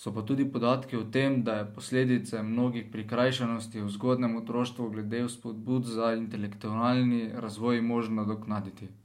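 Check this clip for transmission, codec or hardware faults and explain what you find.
Nothing faulty can be heard in this speech recording.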